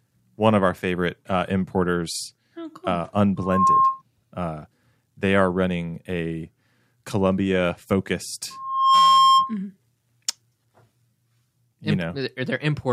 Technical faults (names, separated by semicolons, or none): loudspeaker feedback squeal